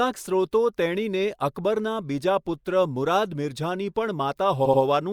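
At 4.65 s the speech stutters until 4.82 s as repeated frames replay the same 80 ms block twice more, adding 160 ms, which fits a short run of compressed frames sent again. Unlike an echo, the copies are identical and don't fade, and unlike a dropout nothing goes missing.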